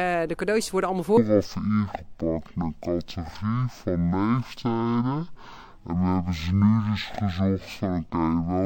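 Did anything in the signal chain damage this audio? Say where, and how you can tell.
Yes. From 1.17 s to the end, the sample-format stage reads stereo as mono, taking interleaved left and right samples as one channel. Every frame lasts twice as long, so the sound drops to half speed, 12 semitones low, with a faint mirrored image in the upper spectrum.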